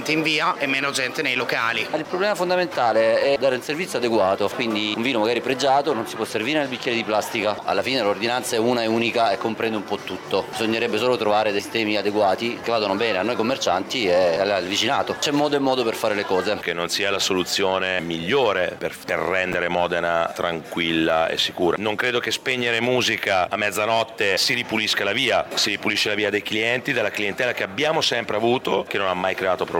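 At 19.52 to 19.54 s there are chunks out of order: one 10 ms chunk of audio arrived late and plays one chunk after the chunk that should have followed it. No audio goes missing, but the two segments are swapped, leaving three hard joins within 20 ms. It sounds like a brief jumbled flick.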